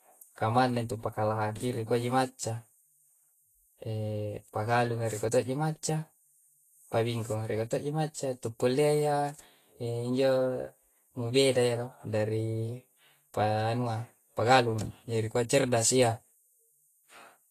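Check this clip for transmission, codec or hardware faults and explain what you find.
One codec fault runs through the whole speech clip. Vorbis compression: nothing above 14.2 kHz, grainy hiss and blurred attacks, likely from low-bitrate coding that replaces fine treble detail with noise, around 31 kbps.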